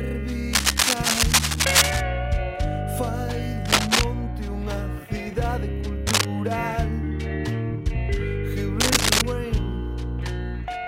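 Cable scratch noise comes in four bursts, at 0.53–2.03 s, 3.65–4.04 s, 6.06–6.25 s and 8.80–9.21 s. Each is a dense, uneven rustle sitting somewhat above the sound, likely from a worn contact being moved. It is continuous scraping rather than isolated clicks or dropouts.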